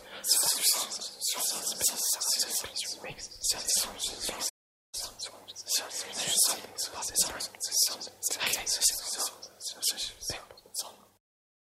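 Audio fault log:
4.49–4.95 s, playback stall: the sound cuts out mid-flow for about 0.44 s, then resumes where it stopped, likely because the player's buffer ran dry.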